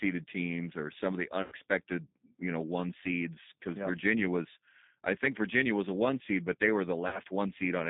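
Speech runs through a G.729 codec for its whole length. The band is limited to about 150 Hz to 3.7 kHz, and the coding damage is plainly audible as a rough, slightly synthetic edge on the voice, which fits an 8 kbit/s stream. VoIP packet loss concealed by the speech codec occurs twice. After "or some of the", from 1.42 to 1.54 s, about 100 ms of audio is missing, which fits five 20 ms packets. The decoder extends the last sound into a buzzy tone or coloured noise that fades. After "seed but they were", from 7.08 to 7.19 s, about 60 ms is lost and bridged the same way.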